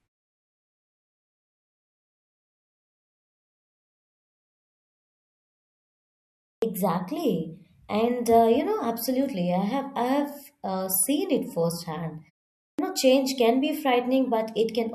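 Speech with a clipped start after a pause at two points: at 6.57 s, following about 6.6 s of silence, and at 12.73 s, after a 0.51 s pause. Each time the output device has dropped into sleep and takes a moment to wake, so the first 53 ms and 56 ms of sound are lost and the speech begins abruptly. Muted pauses, by contrast, only silence the gaps and lose nothing.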